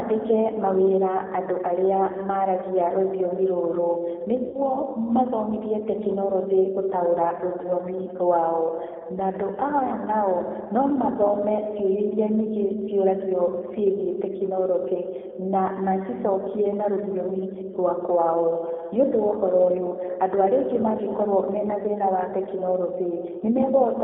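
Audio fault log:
Throughout: G.729 codec. The speech rides an 8 kbit/s G.729A path, squeezed into a 250 Hz to 3.4 kHz line band, so nothing up high survives. The codec damage is plainly audible, with a rough, slightly synthetic edge from rebuilding each frame from a few pulses and a filter.
4.48 to 4.57 s and 7.62 to 7.68 s: VoIP packet loss concealed by the speech codec. Just after "arĩa maaragia rũthiomi rũrũ" about 60 ms goes missing, and right after "mathomithie tekinoronjĩ gũtaũra" another 20 ms. The decoder stretches its last pitch and filter into a fading buzzy tone or coloured noise, and the voice stays weak briefly afterwards while the frames rebuild.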